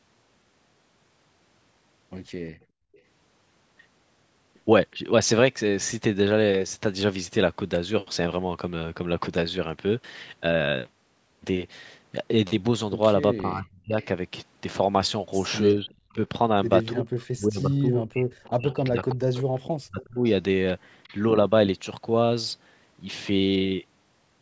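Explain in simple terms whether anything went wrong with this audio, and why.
Several things went wrong, all linked to a call where one side used a loudspeaker.

From 2.52 to 2.93 s the background sound drops away almost completely, then comes back. This is background gated by the echo canceller. It turned the microphone down hard while the loudspeaker was playing.

There is echo leak at 2.93 to 3.0 s, 15.89 to 16.13 s, 18.44 to 20.05 s and 21.03 to 21.14 s. A faint copy of the voice returns 366 ms late. It is loudest in the longer stretch near 19 s. The likely cause is that the echo canceller did not remove everything the microphone picked up.

The talker's voice dips or cuts out in pieces from 13.37 to 13.98 s and again from 15.75 to 20.24 s. The drops are deep, and the second stretch is broken up for about three seconds in total. This is speech suppressed in double talk. The likely cause is both sides talking at once. 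The canceller then turned down the real voice along with the echo.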